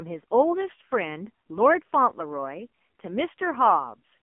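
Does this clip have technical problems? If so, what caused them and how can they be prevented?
Yes. Throughout the speech, the AMR narrowband mobile codec leaves a band of about 200 Hz to 3.4 kHz and a heavy buzzy, synthetic quality from its pulse-driven vocal-tract model, which fits a low mode near 6 kbps. A plain telephone band-limit would sound muffled but not buzzy. To prevent it, record or transmit over a wideband path, or choose a higher AMR mode.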